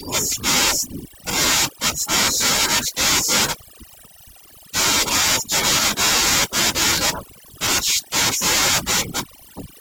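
From start to finish the speech carries overdone noise removal: the noise reducer was pushed so hard that it shuts down individual frequency bands whenever they sit near its noise estimate, taking quiet bits of the voice too. So the background drops and breaks up into little twinkling specks.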